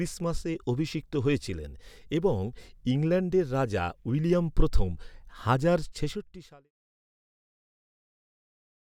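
No technical faults can be heard in this speech recording. The level fades out smoothly near the end, starting around five and a half seconds and completing by 6.72 s with no click or hard edge.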